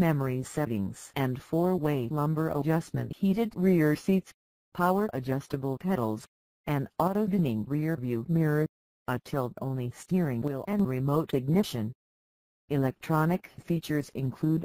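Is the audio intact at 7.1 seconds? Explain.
No. From 7.08 to 7.15 s one channel drops out, likely through a brief loss of one stereo side, so the mono sum falls abruptly by about 6 dB. The waveform shows a sudden 75 ms dip in amplitude; the spectrogram shows a matching uniform darkening across frequencies.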